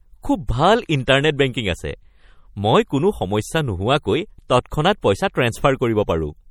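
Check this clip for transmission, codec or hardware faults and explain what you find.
One codec fault runs through the whole clip. MP3 compression is likely, with damage plainly audible from start to end. The sound points to a low bitrate around 48 kbps, where the encoder zeroes weak frequency lines that flicker between frames, giving a watery, swirly quality. On a spectrogram this appears as patchy, blinking holes across bands, with content still reaching about 20.3 kHz.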